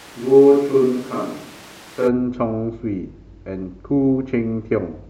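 A switch to a distant microphone is already under way when the audio begins and lasts until 2.07 s. The speech sounds roomy and hollow, thinner in the bass, with room noise roughly 25 dB below it, though the level barely drops. The likely cause is that the close microphone's signal was lost or unused, leaving a pickup further away.

DAB burbling occurs from 0.55 to 0.67 s, inside that stretch. It sounds like brief noise blips over the speech. A small fraction of bits got past error correction into the MP2 data. Corrupted samples put short blips of noise in single sub-bands, which fits about five damaged frames.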